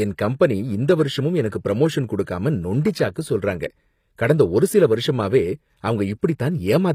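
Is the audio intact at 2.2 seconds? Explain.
No. Pre-echo runs from 2.24 to 2.27 s, about 36 ms ahead of the attack that opens "நொண்டி சாக்கு சொல்றாங்க கடந்த". A transform codec spreads its quantisation error evenly across each block. Here the onset lands late in its block, so noise scaled for that loud attack leaks back into the quiet stretch before it. You hear a brief hiss-like smear just before the sound starts, and the attack comes across soft rather than crisp.

The same stretch also shows the HE-AAC compression damage that runs through the whole clip. Nothing is present above 15.5 kHz, and the upper band has an artificial, gritty sheen, with sibilants sounding metallic or slightly lisped. This is likely HE-AAC at a low bitrate, around 24 kbps, rebuilding the treble by copying lower bands upward under a coarse envelope. Because those copied harmonics don't line up with the real ones, the top end sounds synthetic rather than natural.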